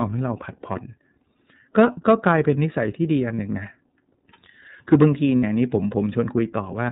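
Speech clip, band-limited below 4 kHz with a slightly rough, synthetic edge throughout, which is plainly audible iLBC codec damage consistent with 30 ms frames at around 13 kbps. Unlike a simple low-pass, the roughness comes from coarse excitation coding. Lost iLBC frames occur at 3.36–3.39 s (30 ms) and 5.38–5.44 s (60 ms). Each gap is filled with a held, buzzy vowel-like sound rather than silence, and the speech snaps back cleanly immediately afterwards.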